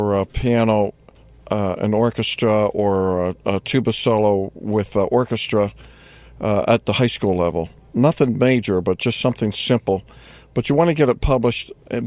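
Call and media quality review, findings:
No audible faults found.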